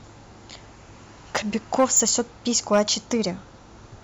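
Hard clipping at 1.36 s, from 1.75 to 2.1 s and from 2.55 to 3.12 s: speech peaks overran a stage's limit by about 4 dB, about 6 dB, then about 4 dB, and were sliced flat. The result is a brief crackle first, then crackle on the peaks of the longer passages.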